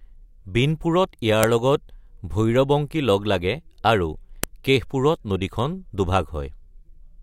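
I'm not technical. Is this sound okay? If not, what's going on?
No. There are two sharp clicks, at about 1.43 s and 4.44 s. This fault is a file header played as audio. The speech seems to have been joined from separate 3-second pieces, and each piece's small block of file information was played as sound instead of being skipped. What sets it apart from ordinary clicks or crackle is that the snaps are exactly 3 seconds apart and land at piece boundaries regardless of what the speaker is doing.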